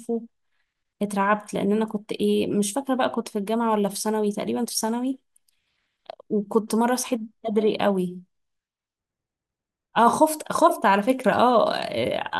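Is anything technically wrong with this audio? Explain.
No, no technical faults are audible.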